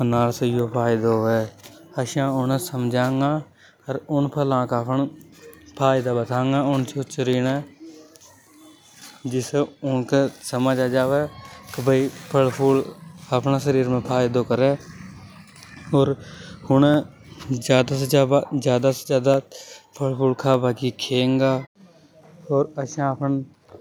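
From 0.13 s to 23.5 s there's a click every 0.6 s, around forty in all. That's likely clock drift buffer slips: two clocks a few hundred ppm apart, so a handful of samples gets dropped or repeated at each slip.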